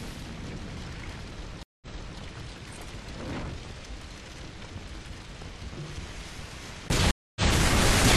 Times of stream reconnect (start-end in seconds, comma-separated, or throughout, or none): 1.63-2.19, 7.11-7.50